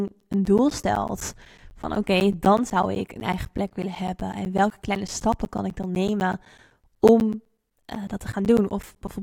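Periodic USB or driver dropouts: something blocks the audio path every 0.125 s, blanking roughly 10 ms to silence, from 0.08 to 9.08 s. Speech ticks steadily wherever there is signal.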